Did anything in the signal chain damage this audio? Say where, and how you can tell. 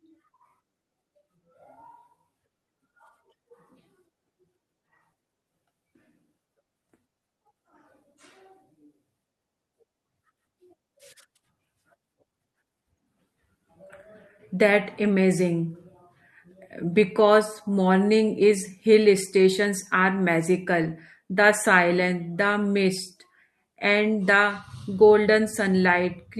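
Yes. Lost packets rebuilt from error correction, a network fault, at 15.03 s, 17.19 s and 20.83–20.89 s. Each spot turns briefly rougher and noisier without any gap because the decoder played low-bitrate copies from following packets. The 40 ms stretch fits two consecutive losses.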